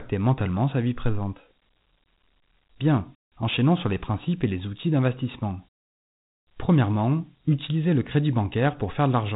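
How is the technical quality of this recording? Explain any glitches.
The recording has clearly audible codec damage throughout, consistent with Dialogic VOX ADPCM. For the whole clip, a 4-bit adaptive step coder, fitting about 32 kbps, leaves a gritty hiss that rises and falls with the speech. Nothing exists above 3.8 kHz. Unlike a plain low-pass, the grit tracks the speech itself.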